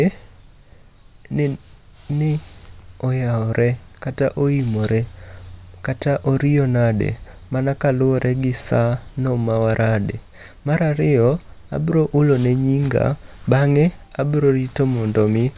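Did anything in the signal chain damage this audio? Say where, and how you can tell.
No, nothing in the signal chain audibly damaged this speech recording, and there is no stage that leaves a mark on the signal anywhere in it.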